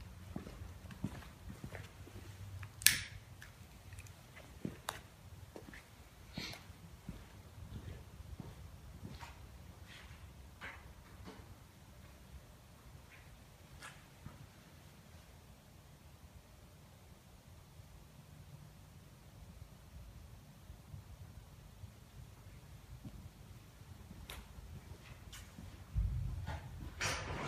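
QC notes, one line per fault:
No technical faults are audible anywhere in the signal.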